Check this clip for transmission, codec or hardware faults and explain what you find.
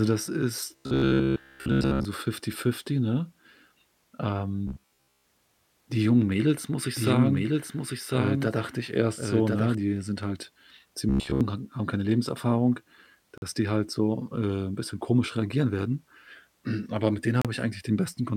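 The clip is speech and carries three kinds of fault: a robotic buzz in three places, a doubled track for a few seconds, and two short dropouts to silence.

Robotic sound from repeated short buffers appears from 0.76 to 2.05 s, 4.67 to 5.24 s, and 11.09 to 11.41 s, the last right after "die sind halt" and before "hag haben keine". The speech turns into a stiff metallic drone pitched at 66.8 Hz, still roughly tracking the syllables. That pitch matches a loop of about 15 ms. The likely cause is audio arriving late, so the player replays its last short buffer over and over, with most of the real material in those stretches skipped.

A doubled audio track runs from 6.97 to 9.75 s, starting after "muss ich" and ending before "die sind halt". A second full-band copy of the speech trails about a second behind the original at roughly 5 dB lower. It has no reverberant tail and switches on and off abruptly at both ends, unlike an echo from a room. 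The likely cause is the same signal being captured twice, once through a slower path.

A gap between stream segments cuts in at 13.38 s, lasting 45 ms, just before "die halt so äh", and again at 17.42 s, lasting 33 ms. Each is a hard-edged hole of pure silence, and nothing is missing from the speech on either side. The two gaps fall 4 s apart, which points to segment boundaries whose timestamps leave a small space that the player fills with silence.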